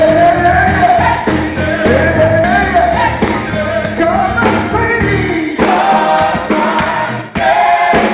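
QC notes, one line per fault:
2.44–2.46 s, skip ahead: playback jumps forward with no gap, and around 0.4 s of audio is simply missing. That stretch was discarded, on the way or by an overflowing jitter buffer, while later audio was already queued, so the two sides of the cut are spliced almost directly together.
7.22–7.91 s, jitter buffer speed-up: the audio runs at about 105% speed while the pitch stays unchanged, so it sounds hurried. The buffer held more than its target delay, so the receiver trimmed many short pitch-period pieces in succession, a few tens of milliseconds in total. Over the whole clip nothing is heard above 4 kHz, which fits a narrowband G.711 mu-law call path at 64 kbps.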